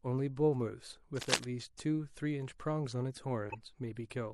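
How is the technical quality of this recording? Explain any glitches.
The recording has three technical problems: a constant codec coloration and two brief glitches.

Throughout, the speech sounds watery and swirly, with smeared consonant attacks and dulled treble. This is likely MP3 compression at a low bitrate, around 64 kbps, where the encoder cuts high frequencies and lets weak spectral detail flicker between frames.

From 1.17 to 1.46 s there is a rough scratching, rustling burst about as loud as the speech itself. It fits cable scratch noise: a worn lead or connector shifting, so its contact resistance jumps erratically and injects uneven noise.

From 3.50 to 3.55 s a short glitch appears, peaking near -30 dBFS. This is a corrupt frame decoded: roughly three damaged compressed frames were played anyway, and misread values pushed energy into wrong frequencies for their duration.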